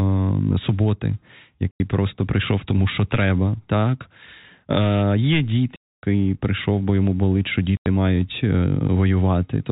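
Packet loss filled with silence at 1.71 s (90 ms, before "просто прийшов тому що"), 5.76 s (270 ms, before "прийшов бо йому болить") and 7.77 s (90 ms, after "бо йому болить що"): missing packets, which fits 30 ms packets, become hard-edged holes in the telephone-band speech.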